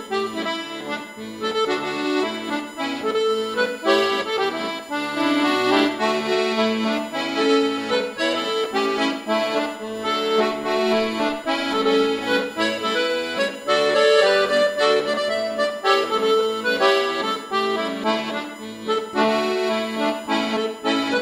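USB whine runs through the whole clip as a steady, fixed-pitch tone at 1 kHz with its strongest component at the 3 kHz harmonic, sitting roughly 25 dB below the audio itself. Its pitch points to the USB bus's 1 ms frame timing: the current drawn in each frame leaks into the audio path through the shared power or ground, so the frame rate and its multiples are heard as a constant whine alongside the sound.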